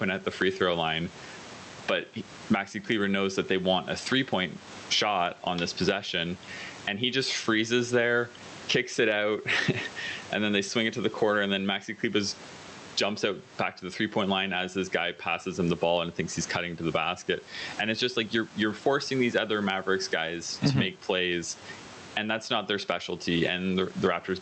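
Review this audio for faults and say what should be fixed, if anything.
Gain pumping runs through the whole recording. The input gain is likely set far too high, with a fast limiter or compressor clamping it down whenever the talker gets loud and releasing it in the pauses. The room noise sits about 32 dB under the speech, and the level swings by roughly 20 dB. The dynamics sound flattened and squashed, and the top end stops near 8 kHz, consistent with a call codec like Opus. To prevent it, lower the microphone gain so peaks fit without heavy limiting, and slow or disable the automatic gain stage.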